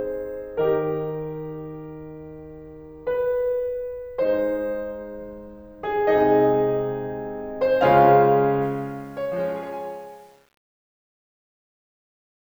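From 8.62 s to 12.58 s the music's fade-out, starting at around 8.6 s, shows truncation distortion on a fade. The level stage drops low bits without dither, which fits about 9-bit resolution. From 9.16 s the tail turns gritty.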